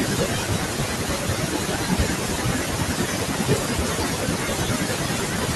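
Noise suppressor artifacts run through the whole recording. The suppressor judges each frame's bands against a noise estimate and pulls down whatever looks steady, so the room noise, about 17 dB below the speech, dips in pauses and resurfaces beneath it. On a spectrogram the noise floor appears blotchy and patchy rather than an even haze.

From 0.0 to 5.56 s, across nearly all of it, there is speech cut by the noise suppressor. Quiet consonants and trailing syllables were mistaken for noise and attenuated, at worst by about 18 dB, so they sound swallowed and faint. A spectrogram shows fragmented high-frequency energy, and the waveform shows abruptly thinned word edges.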